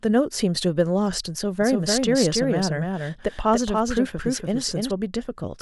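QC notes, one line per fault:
1.61–4.91 s, doubled audio track: a second copy of the speech sits underneath the original, trailing by roughly a third of a second and around 5 dB quieter, so every syllable gets a flat, clean repeat with no reverb tail or room sound to it. It cuts in and out abruptly at those edges rather than fading. That's most likely the signal being picked up twice, once through a slower route, or an edit leaving two out-of-step copies stacked together.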